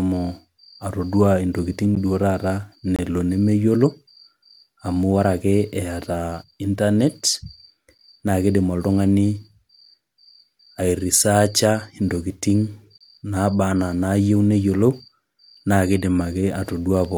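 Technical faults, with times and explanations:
1.95, 2.96–2.99, 7.98 (just before "na kidim") and 12.98–13.01 s: gap between stream segments. Silences of 7 to 28 ms at joins between 1-second segments cut the speech without losing any. They show as flat-line notches in the waveform and blank vertical stripes on the spectrogram.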